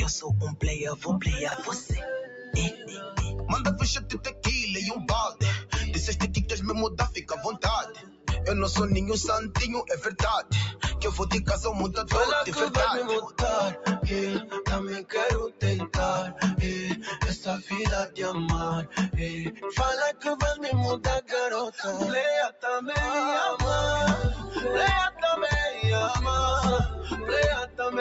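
All the way through, the level swings by around 10 dB, with held tones and tails sinking while attacks poke through. A noise suppressor built for speech was left on for music or sounds and keeps mistaking sustained material for noise. The sound also stops at 8 kHz, which fits the call's microphone processing.

From 0.96 to 3.18 s the sound dips by up to about 11 dB for roughly a second in total. This is sound cut by the noise suppressor, pulling down steady parts and clipping their decay.

Inside that stretch, at 1.48 to 1.54 s, there is a brief jumbled stutter. These are chunks out of order: a 20 ms block played two chunks late, leaving hard joins.

The same suppressor cuts return at 4.27 to 5.73 s (about 14 dB deep), 7.17 to 8.29 s (about 16 dB), 10.11 to 10.83 s (about 14 dB), and 24.36 to 25.22 s (about 11 dB). Each one thins sustained sound and shortens its tails.

The longest cut runs from 13.26 to 22.64 s, reaching about 15 dB down across roughly three seconds of the affected sound.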